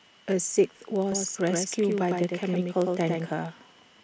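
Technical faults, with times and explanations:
Throughout: block size mismatch (padded). A steady buzz at 15.6 Hz runs under the speech. It fits one stage reading 1024-sample blocks while the stage before writes blocks a little shorter, with the missing tail of each block filled with silence. That tiny gap repeats at the block rate and produces the buzz. Because each block carries slightly less real audio than it occupies, the speech plays at 0.999 of its proper speed while the pitch stays essentially normal.
1.12 s to 3.30 s: doubled audio track. A second full-band copy of the speech sits about a tenth of a second behind the original and roughly 5 dB quieter. It has no decay tail or room colouring, so it reads as a distinct slapback repeat rather than an echo. It cuts in abruptly at 1.12 s and drops out just as abruptly at 3.30 s. The likely cause is the same signal being captured a second time through a slower path, or an edit that left two out-of-step copies overlapping.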